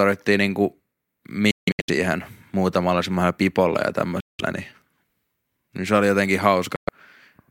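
Speech cuts out three times, at 1.51–1.90 s in scattered gaps, at 4.20–4.40 s and at 6.76–6.89 s. Each silence has abrupt or briefly faded edges and the speech resumes further along, as if it had played on. This is likely a Bluetooth dropout, with packets arriving too late to play.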